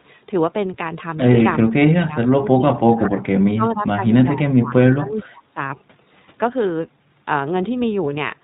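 Throughout, the speech sounds band-limited, rough and slightly synthetic, the plainly audible mark of the iLBC codec. As a narrowband codec it cuts everything above 4 kHz, and the artefacts fit its 15.2 kbps, 20 ms mode. Between 1.69 and 4.06 s, 4.34 and 4.76 s, and 4.94 and 5.59 s, the speech dips and breaks up, falling by roughly 20 to 30 dB. This is likely speech suppressed in double talk: an echo canceller mistook the talker for far-end echo and attenuated both.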